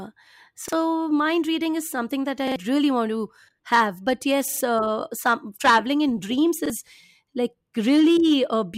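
Repeated buffer stutters occur at 0.68 s (before "mind reading is something"), 2.48 s, 4.48 s (before "uh some traveling in") and 6.66 s (after "some traveling in dreams"). Each time, new audio arrived late, so the device replayed the same 43 ms block once, twice, three times and once, which fits a 2048-sample buffer. On a waveform these show as identical copied segments; on a spectrogram, each repeat joins the next at a hard vertical seam.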